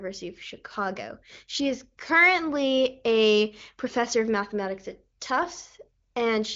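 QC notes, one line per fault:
No faults found; the speech carries the band-limited character of the AMR wideband (HD Voice) codec, with nothing above about 7.3 kHz, and sounds consistent with one of its higher rates.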